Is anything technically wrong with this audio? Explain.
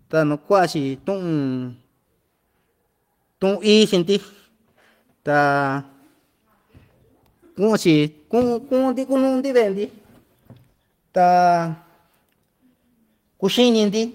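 No, nothing technically wrong can be heard here.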